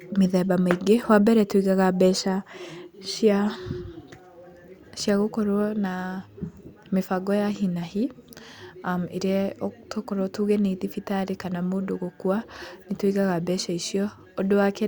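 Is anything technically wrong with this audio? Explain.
No, nothing technically wrong can be heard in this speech recording; the signal stays intact and steady throughout.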